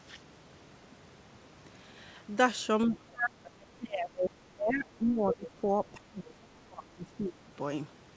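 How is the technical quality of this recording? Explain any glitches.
The recording has two glitches, both on the talker's side of a call. The top end stops at 8 kHz, which fits a wideband call codec like G.722.

From 2.87 to 7.49 s there's speech suppressed in double talk: the voice keeps ducking, dropping by as much as around 25 dB for roughly four seconds in total. The likely cause is an echo canceller that couldn't tell the talker from loudspeaker echo and pulled both down.

Between 5.06 and 5.10 s there's a quick scrap of the other side's voice leaking through, sitting around 20 dB below the talker. It's brief and faint, and most likely loudspeaker pickup that the echo canceller didn't fully remove from the mic.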